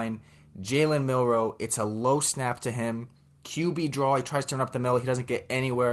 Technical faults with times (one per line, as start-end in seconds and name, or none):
none